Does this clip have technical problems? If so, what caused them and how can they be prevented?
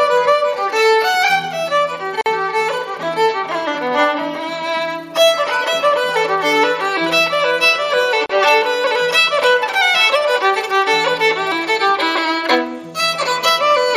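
Yes: gaps at joins of encoded pieces, about 48 ms at 2.21 s and 34 ms at 8.26 s, six seconds apart. Untrimmed encoder delay and end padding leave silence, and the sound resumes where it stopped, unlike a dropout, which loses audio. Trim encoder delay and padding, or encode gaplessly.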